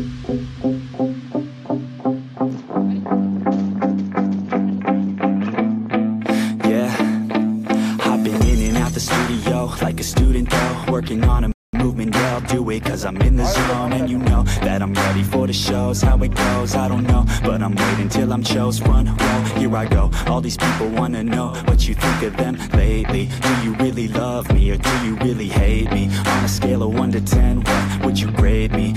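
At 11.52 s a playback stall silences the audio for about 214 ms, likely because the player starved of data. A flat gap appears in waveform and spectrogram.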